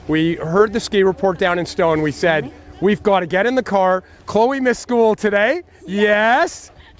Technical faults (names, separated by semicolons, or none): none